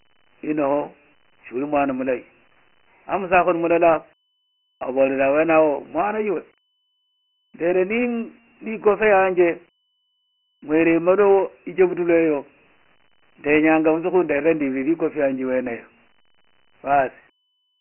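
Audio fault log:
Throughout: Dialogic VOX ADPCM. The speech carries a gritty hiss that tracks each syllable, and nothing sounds above 3 kHz, which fits 4-bit ADPCM at 6,000 samples a second (a 24 kbps stream). Its coarse step-size quantisation causes the heavy grain.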